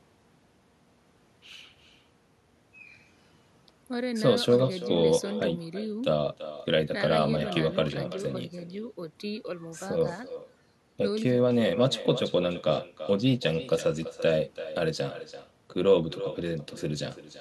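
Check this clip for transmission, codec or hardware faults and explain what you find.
One fault runs through the whole recording: echo with no canceller. At the far end, the incoming speech plays on a loudspeaker, the microphone there picks it up, and nothing removes it before it returns. Every phrase is shadowed by a thinner copy arriving roughly a third of a second later, at about 13 dB below the original. Room reverberation smears into a continuous tail, but this is a distinct, delayed repeat.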